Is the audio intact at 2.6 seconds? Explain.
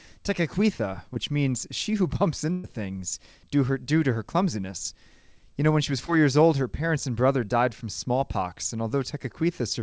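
No. A burst of packet loss runs from 2.52 to 2.66 s. About 120 ms of audio is missing, concealed by the receiver stretching and fading the last sound into a held buzz or hiss before "things due her due".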